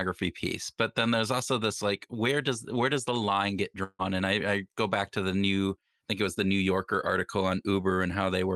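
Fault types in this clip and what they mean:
Long network dropout: Right after "does the line get", around 3.83 s, the sound stops arriving for roughly a fifth of a second. The receiver stretches the last bit into a fading buzz or hiss for about 150 ms, then there's a short dead gap of about 40 ms before things pick up again near 4.02 s, with about 160 ms of real audio simply gone. A likely lost run of packets on the Opus call path, where the band already tops out near 12 kHz.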